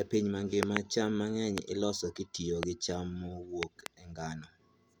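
Loud pops at 0.63–0.79 s (a double pop), 1.58–1.60 s, 2.63–2.65 s and 3.63–3.88 s (another double): sharp thumps far louder than the speech, which continues underneath, likely from voltage pulses such as static or switching.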